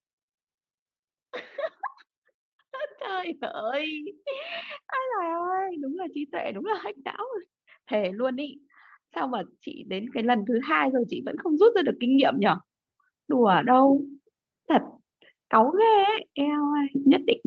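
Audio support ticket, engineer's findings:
Automatic gain rising, 3.0–6.9 s: level swells by about 6 dB over nearly four seconds, voice and background together. AGC judged input too quiet, ramped gain up. Top end stops around 8 kHz, fits wideband Opus.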